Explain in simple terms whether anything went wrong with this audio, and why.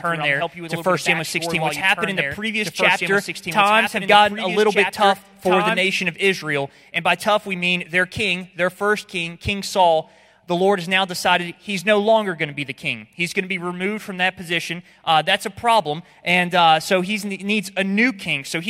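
From the very start until 5.8 s, the sound has a doubled audio track: a second copy of the same audio plays along about two seconds behind the first, a little quieter. This likely happened because the sound was picked up twice, once through a slower route. Unlike an echo or a room's reverberation, the copy doesn't fade away or sound roomy; it stays clear and then cuts off abruptly at 5.8 s.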